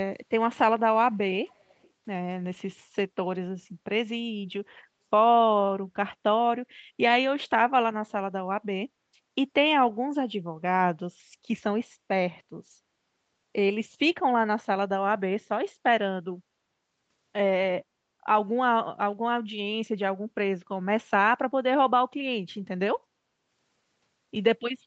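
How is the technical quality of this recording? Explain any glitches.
The recording has one audible glitch, a brief echo leak; the sound stops at 8 kHz, which fits a wideband Opus call stream at around 40 kbps. Echo leak, 1.49 to 1.9 s: a very faint delayed copy of the speech, trailing by about 343 ms, comes back far below the main speech. The likely cause is a far-end loudspeaker whose echo canceller let some of its microphone pickup slip through.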